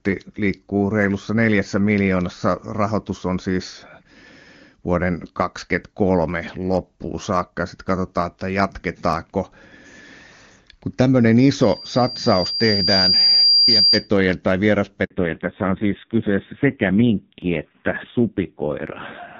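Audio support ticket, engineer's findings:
Loudspeaker feedback squeal, 11.61 to 14.09 s. A 4.8 kHz tone swells over roughly a second and a half to about 5 dB above speech. Mic-to-speaker loop gain exceeds one.

Handover gap, 15.04 to 15.10 s. Speech drops out for 60 ms. Network switch; no speech frames delivered until the new link comes up. Audio in that window is lost.

Fallback to narrowband, 15.10 s to end. The band above 4 kHz is gone. Speech turns dull and rough compared with the earlier clear HD Voice. The sound points to low-rate AMR narrowband, around 5.9 kbit/s.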